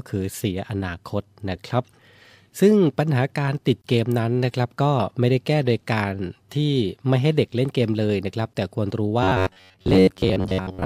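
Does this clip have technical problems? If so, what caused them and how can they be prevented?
Yes. From 9.23 s to 10.85 s the speech turns into a rigid, metallic buzz at 93.8 Hz that only loosely follows the words. This is robotic sound from repeated short buffers, likely caused by new audio arriving too seldom. The playback software filled the gaps by replaying its last chunk of about 10.7 ms for most of that stretch, and that repeat rate forced the fixed pitch. A larger jitter buffer and steadier network or processing timing would prevent it.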